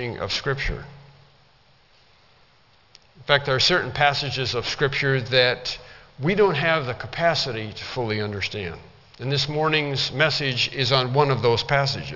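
Aliasing runs through the whole clip, from start to finish. The sound was resampled to a lower rate without a proper low-pass filter first, which fits a drop from 48 kHz to 12 kHz. Everything above 6 kHz folded back below that line. Those folded tones land at pitches unrelated to the source. They sit only about 10 dB under the wanted sound. High content turns gritty and metallic, and the spectrum stops hard at 6 kHz.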